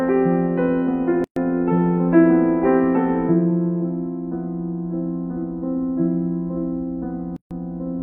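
At 1.24 s the music just drops out for 122 ms, then again at 7.36 s for 144 ms, six seconds apart. That's a gap at a join of encoded pieces: separately encoded chunks spliced untrimmed, so encoder delay and end padding leave silences with smeared edges before the music resumes.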